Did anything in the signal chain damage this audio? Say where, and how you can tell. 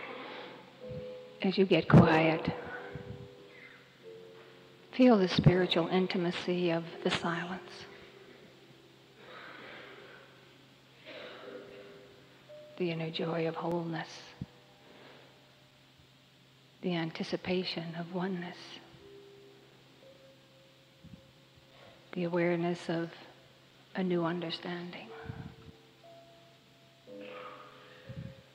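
Yes: periodic USB or driver dropouts at the driver or buffer stage, ticks every 2.0 s from 1.70 to 27.72 s. Each is a roughly 4 ms silent gap. The strict regularity rules out random network loss.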